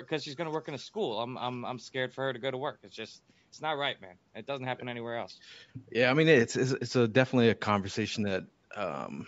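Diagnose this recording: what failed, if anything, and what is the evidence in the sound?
Nothing failed; no faults found.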